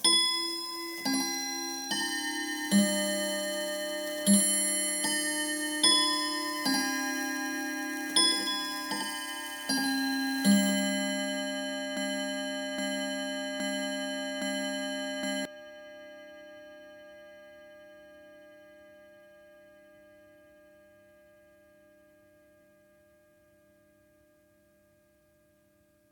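At 11.97 s the audio falls into a broken-record loop: a fragment of about 0.82 s plays four times back to back, identical each time, until 15.45 s, and whatever should have played across those seconds never arrives. The likely cause is a player, encoder or stream that stalled and kept resending its last held fragment. On a waveform the same envelope shape tiles exactly; a spectrogram shows one block of pattern copied at a fixed 0.82 s spacing.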